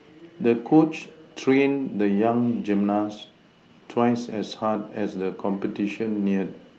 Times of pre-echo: none

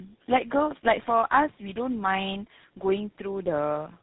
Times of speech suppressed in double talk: none

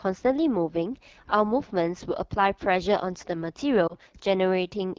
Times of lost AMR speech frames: 3.87-3.94

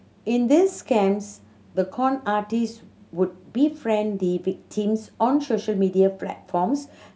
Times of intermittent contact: none

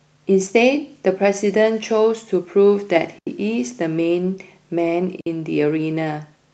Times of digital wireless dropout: 3.19-3.27, 5.21-5.27

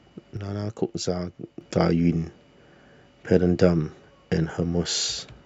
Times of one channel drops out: 0.37-1.61

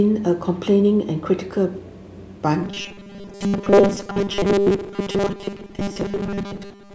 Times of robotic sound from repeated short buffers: 2.63-6.94

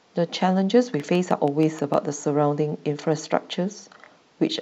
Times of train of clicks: 1.00-1.95

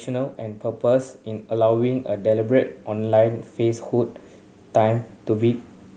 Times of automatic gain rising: 0.05-4.20

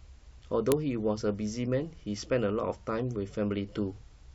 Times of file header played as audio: 0.72

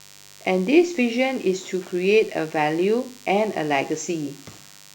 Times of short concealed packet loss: none

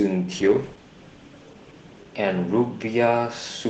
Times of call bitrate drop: 0.33-3.69

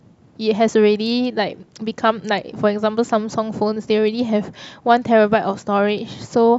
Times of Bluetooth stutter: none

